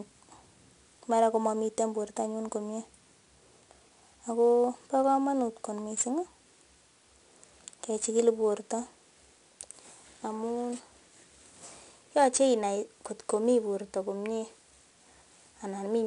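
From start to finish the speech carries 4-bit ADPCM compression, plainly audible. Each sample is coded as a coarse 4-bit step from a predicted value, so the quantisation error rides along with the signal as a gritty hiss that rises on louder syllables, and abrupt onsets smear where the adaptive step lags behind. Nothing survives above 10.6 kHz, leaving the top end dull, and the data rate points to roughly 89 kbps.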